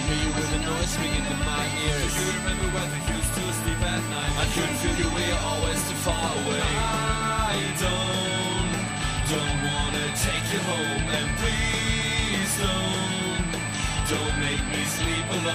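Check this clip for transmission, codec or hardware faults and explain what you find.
One hardware fault runs through the whole clip. USB whine sits at a steady 8 kHz, roughly 10 dB below the sound. USB microframe current leaks through power or ground, producing a thin, fixed-pitch whistle.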